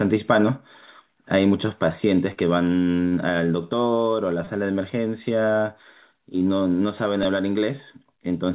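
Short concealed packet loss at 2.33–2.39 s and 3.08–3.14 s: each time about 30 ms of this narrowband G.711-style speech, with nothing above 4 kHz, arrived too late and was filled by extending the preceding sound, leaving a brief smear. Repeated buffer at 4.45–4.47 s and 7.23 s: a 5 ms chunk replays four and then three extra times while fresh audio is late, heard as a tiny buzzy click, with essentially nothing lost.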